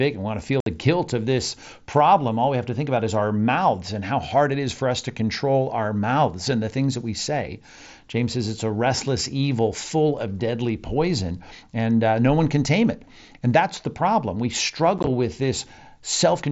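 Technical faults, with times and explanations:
0.60–0.67 s, unconcealed Bluetooth headset packet loss: right after "and want to feel" and before "guilt of this problem", the speech drops out for about 60 ms with hard edges. A run of consecutive voice packets between headset and phone went missing, and silence or an idle pattern was put in their place with no concealment.
14.98–15.07 s, unconcealed Bluetooth headset packet loss: a brief rough, chopped crackle, with about 37.5 ms lost in short holes spread over 90 ms, the longest 15 ms. Each hole fits a few lost headset packets, so the gaps break the otherwise band-limited wideband mSBC sound into fragments.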